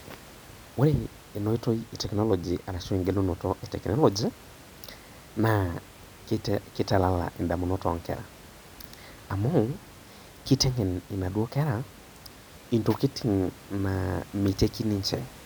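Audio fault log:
No fault is present in this speech audio.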